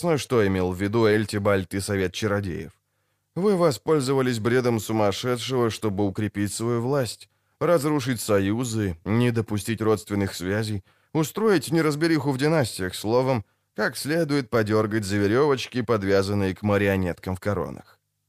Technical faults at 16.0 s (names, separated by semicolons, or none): none